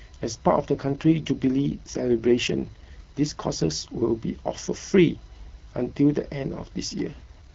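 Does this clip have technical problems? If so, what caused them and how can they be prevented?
Yes. A steady, thin whine runs under the whole clip, a fixed pitch at 1 kHz with its strongest component up at 8 kHz, sitting roughly 35 dB below the speech. This is USB whine: the bus draws current in regular 1 ms frames and 125-microsecond microframes, and those pulses leak into the audio through shared power or ground. Prevent it with an isolated or externally powered interface, or a ground-loop isolator on the USB line.

From 0.74 to 3.73 s, and again from 7.13 s to the end, the speech turns rougher and more synthetic without any gap or loss of bandwidth, then clears again between the two stretches. This is an AMR rate drop on the wideband codec, which fits a step from 12.65 down to 8.85 kbit/s as a weak radio link pushed bits into error protection. Prevent it with a stronger signal, such as better coverage or Wi-Fi calling.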